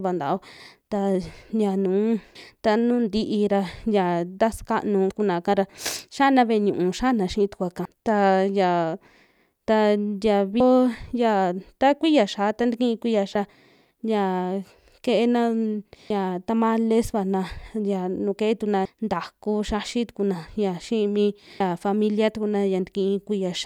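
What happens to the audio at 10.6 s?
At 10.60 s the speech skips forward: roughly a third of a second of audio is missing, and the two sides are butted together with no silence between them. This is audio missing between chunks, and the likely cause is a recorder or processor working in 3.0 s blocks that dropped a stretch while handing over from one block to the next. On a waveform or spectrogram there is no gap, only a sharp vertical seam where the energy pattern jumps abruptly.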